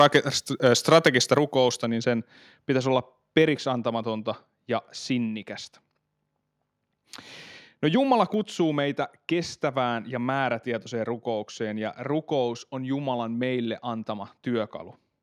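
From 0 to 0.17 s and again from 0.66 to 1.38 s, the loudest syllables carry a harsh, crackling edge. This is likely microphone overload: peaks driven about 5 and 6 dB past the converter's limit, with their tops flattened. Unlike codec distortion, the grit appears only on the peaks, not on quieter passages.

At 1.38 s, right after that distorted stretch, the level drops about 4 dB in a single step, and the background falls with it. This points to the microphone volume being stepped down automatically in response to the overload. It is an abrupt jump, not a gradual fade.

From 1.85 s to the end, the sound turns dull and muffled because de-emphasis has been applied wrongly. A treble cut meant to undo a boost that was never there, or applied a second time, tilts the response down to about 14 dB lower at 10 kHz than at 1 kHz. The roll-off is a smooth, gradual slope rather than the sharp cut-off of a low-pass filter.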